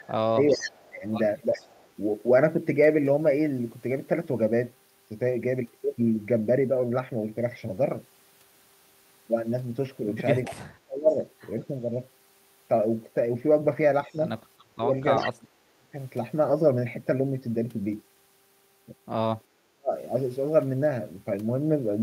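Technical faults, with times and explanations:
0.0–1.89 s, echo leak: a faint delayed copy of the speech trails it by 381 ms, about 15 dB down, likely loudspeaker pickup the far end's echo canceller failed to remove. It is a separate late repeat, not room reverberation.
0.3–1.6 s, speech suppressed in double talk: the talker dips in pieces, about 30 dB at worst, for roughly 0.7 s in total. This is likely the canceller turning down overlapping speech, not a dropout, since level returns between dips.
10.45–11.65 s, echo leak: the same 381 ms delayed copy returns, about 15 dB below the speech, likely from incomplete echo cancellation. The late repeat distinguishes it from reverb.
10.49–11.99 s, speech suppressed in double talk: choppy dips up to about 35 dB, totalling around 0.7 s, likely the canceller attenuating its own talker along with the echo during overlap rather than packet loss.
14.07–15.97 s, speech suppressed in double talk: the deepest cuts, about 40 dB, chop the speech for roughly 1 s in total. 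This is likely double-talk suppression, with gaps following the overlap rather than landing randomly.
14.12–14.16 s, echo leak: a very faint scrap of the 381 ms delayed copy slips through, likely leaked loudspeaker echo. It is brief, not a continuous reflection.
15.17–15.31 s, echo leak: a short, louder burst of the 381 ms echo, about 10 dB below the speech, likely a momentary canceller lapse.
19.68–19.94 s, speech suppressed in double talk: a brief dip of about 40 dB lasting roughly 0.3 s, likely overlap suppression, recovering quickly rather than fading as a level drift would.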